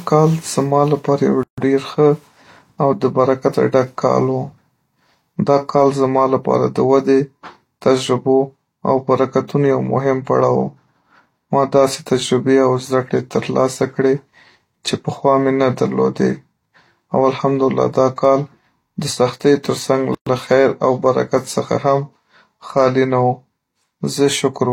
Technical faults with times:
1.43-1.58 gap at a join of encoded pieces
20.15-20.27 gap at a join of encoded pieces

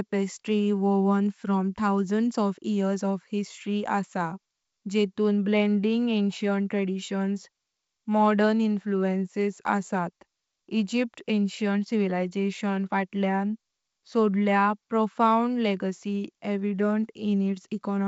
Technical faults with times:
none

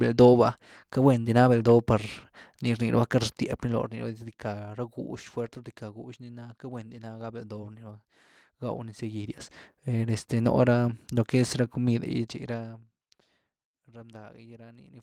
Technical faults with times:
none

